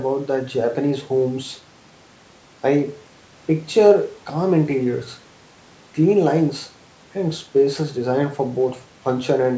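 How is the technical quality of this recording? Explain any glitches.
The recording has one fault present throughout: a block size mismatch (truncated), heard as a steady buzz at about 91.9 Hz under the speech for the whole clip. One stage hands over longer blocks than the next stage reads, so the tail of every block is discarded. Each discard leaves a small discontinuity, and these repeat at the block rate, producing the buzz. The ratio here is 1.0, so the speech runs at its normal speed and pitch. The call microphone processing trims the lowest bass, and nothing is heard above 8 kHz.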